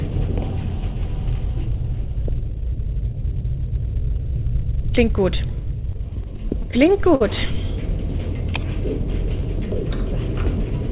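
From 5.92 to 7.23 s the sound drags and catches about a dozen times, each hitch briefly smearing or holding the previous sound, the longest lasting about 52 ms. This is repeated stalls, or stutter. Packets arrived late or too slowly, so the jitter buffer kept running dry, and the receiver stretched the last audio to cover roughly 160 ms, about an eighth of that stretch. Nothing is lost, but timing suffers. The audio stops sharply at 4 kHz, which points to a G.711 mu-law call path.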